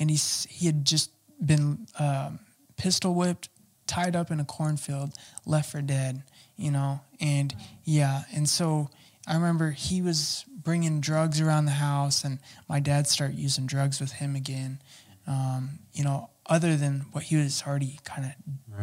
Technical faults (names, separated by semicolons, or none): none